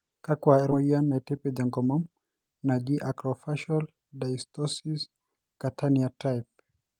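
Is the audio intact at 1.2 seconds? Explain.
No. From 0.80 to 1.94 s the speech is caught in a jitter buffer speed-up. The receiver's buffer had built up more audio than it wanted, so it trimmed short slices of one or a few pitch periods, again and again, to catch up. Around 150 ms vanishes, and the passage runs at about 110% speed and sounds hurried. Unlike a resampling speed change, the pitch stays put, and nothing drops out abruptly as in packet loss.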